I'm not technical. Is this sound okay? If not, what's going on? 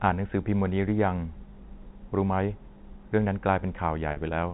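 No. Near the end, from 4.12 to 4.16 s, there is packet loss with pitch repetition. About 40 ms of sound went missing in transit. The phone system covered the gap by repeating the last bit of tone, so you hear a brief, slightly buzzy held sound. The telephone coding itself limits the sound to phone-line quality.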